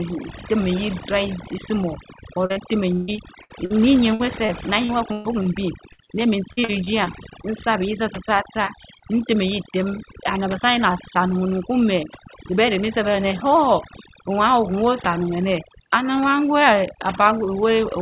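Overdone noise removal runs through the whole clip. The suppressor was pushed too hard, so it pulls individual frequency bands right down whenever they sit near its noise estimate, and the quieter parts of the speech go along with them. You get a background that drops away and breaks up into little twinkling specks. It all sits inside a band that stops at 4 kHz, which fits a G.711 mu-law call path.

Just after "nsumar or", there are two short concealed packet losses back to back, at 2.46 to 2.52 s and 2.52 to 2.58 s, each about 40 ms. The receiver papered over each hole by carrying the last bit of sound forward and then blending back into the real audio. It comes across as a quick smear or wobble rather than a clean gap.

From 2.94 to 3.72 s there is repeated packet loss with a robotic sound. Four gaps land close together, the longest 142 ms, and roughly a third of that stretch is patched-in sound. 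Each patch extends what came before, and the next hole arrives before things settle, so it turns choppy with pieces missing. The same thing happens again from 4.14 to 5.47 s, with five gaps, the longest 122 ms, and about a fifth of the span filled.

At 5.93 to 6.00 s there's a burst of packet loss, about 60 ms lost in one go. The concealment holds the last sound and fades it, so it reads as a brief held buzz or dying hiss, and then the speech picks up further along with that slice gone. A single short concealed loss follows right behind it at 6.04 to 6.09 s, only 20 ms, and it's heard as a small smear or wobble.

The last robotic stretch starts just after "neh min" and runs from 6.53 to 7.45 s. It has six gaps, the longest 45 ms, and around a sixth of the span is filled. The holes are shorter here, but it is still choppy with pieces missing.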